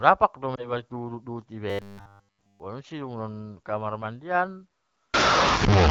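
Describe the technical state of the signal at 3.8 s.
At 3.8 s the speech is intact, with no fault, only the light, steady band-limiting of the AMR wideband (HD Voice) codec, whose clarity fits a rate of about 12.65 kbit/s.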